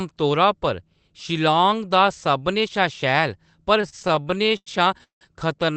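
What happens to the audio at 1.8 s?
Nothing goes wrong at 1.8 s: the speech carries on intact there, with no dropout, click or distortion, only the steady narrowed band of the Opus call path.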